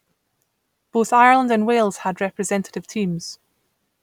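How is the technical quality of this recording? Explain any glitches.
No technical glitches can be heard anywhere in this recording. The speech continues without any break, dropout or added disturbance.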